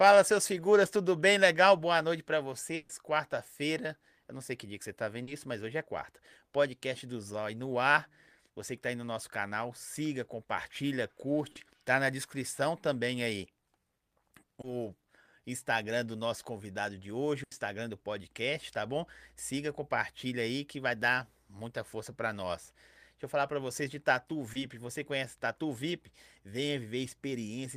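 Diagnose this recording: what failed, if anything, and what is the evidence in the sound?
Burst of packet loss at 2.75 to 2.91 s and again at 17.43 to 17.53 s, a network-stage fault. Roughly 140 ms and then 80 ms of consecutive packets never arrived in time, so the receiver extended the last received sound and faded it down across each gap. What you hear is a held, decaying continuation in place of real speech, after which the talk resumes further along with that stretch simply gone.

Short concealed packet loss, also on the network side, at 5.23 to 5.29 s, 11.51 to 11.57 s, 14.61 to 14.65 s and 24.53 to 24.57 s. Each hole is small, about 40 ms for the first two and 20 ms for the last two. The decoder bridged it by continuing the preceding sound and then crossfading back into the real stream, leaving a brief smear or wobble where a fraction of the speech went missing.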